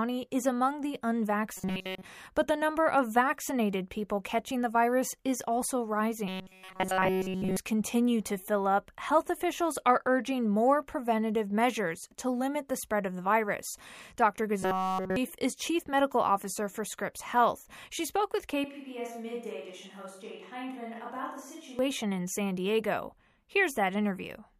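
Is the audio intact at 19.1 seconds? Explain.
No, 19.1 s sits inside a switch to a distant microphone that runs from 18.64 to 21.79 s, right after "she spoke with". The close mic's signal likely dropped out, leaving a far-off pickup like a camera mic to carry the speech. It suddenly turns roomy and hollow, loses bass, falls by roughly 10 dB, and brings up room noise sitting around 35 dB under the speech. It snaps back just as abruptly at the end.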